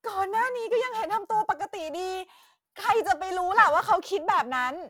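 Periodic clock jitter runs throughout the speech: interference wobbling the converter clock at around 700 Hz adds sidebands beside each component, giving a rough, metallic edge that disappears in pauses.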